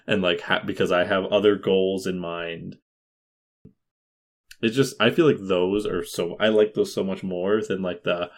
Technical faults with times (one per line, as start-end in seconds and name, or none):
3.22-3.65 clipped start after a pause
3.91-4.44 rebuffering stall